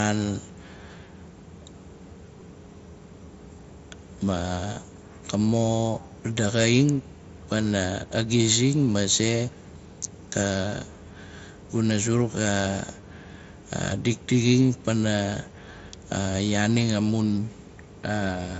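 Speech over a Bluetooth headset link, with concealed Bluetooth headset packet loss at 2.40, 4.74 to 4.76, 13.01 and 17.28 s. The receiver patched each gap with a repeat of the preceding waveform, so the 4.74 s gap, about 22.5 ms, buzzes briefly, while the single drops are nearly hidden by that patching, and the mSBC codec passes speech up to 8 kHz.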